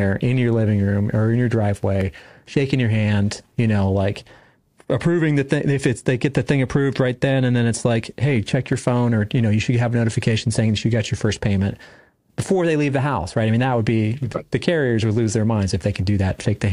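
From 1.65 to 2.20 s, and again from 8.36 to 8.91 s, four CD scratch ticks recur at roughly seven per second, once per disc revolution, where a blemish wipes out more data than error correction can rebuild and the player conceals the damaged samples. They are brief clicks, the longest about a millisecond or slightly more. A waveform shows evenly spaced spikes or tiny gaps, and a spectrogram shows thin full-height vertical lines.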